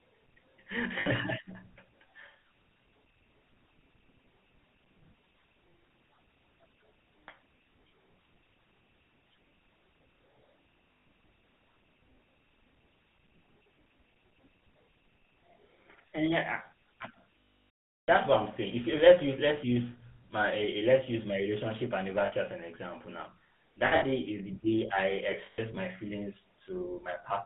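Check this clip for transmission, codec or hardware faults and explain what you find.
Yes, there are two faults: the whole clip has passed through the GSM full-rate codec, and it also has six stretches of lost GSM frames.

GSM full-rate codec, throughout: the speech is coded at 13 kbps and limited to about 150 Hz to 3.5 kHz. Because the excitation is a sparse pulse train, the speech sounds buzzy and gravelly. A spectrogram shows nothing above 3.5 kHz and a coarse, smeared harmonic pattern.

Lost GSM frames, at 1.0 s (60 ms), 11.01 s (140 ms), 17.4 to 18.09 s (700 ms, just before "what I'm saying"), 22.26 s (60 ms, between "let's use my relationship" and "as an example now"), 23.86 s (120 ms scattered over about 0.16 s, longest run roughly 70 ms), and 25.46 s (120 ms, after "day I"). Each missing frame is filled by repeating the settings of the last good one. This holds a rough, metallic ring, and the 700 ms gap fades to silence after about a third of a second. 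On a spectrogram these stretches appear as flat, frozen bands. On a waveform the 700 ms gap shows as an envelope cut to silence.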